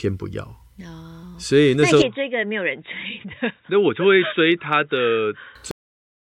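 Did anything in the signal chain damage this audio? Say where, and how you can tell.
Yes. Input switched to a poorer device at 2.02 s, a driver-stage change, likely to another microphone or a headset call profile. Without any gap, everything above 3.8 kHz vanishes, the level drops about 5 dB and a faint new noise floor appears until 5.55 s.

Cut-off end at 5.71 s, at the buffer or storage stage. The speech stops in the middle of a sound and falls straight to digital silence with no decay for the last half second, because the final buffers were never written out.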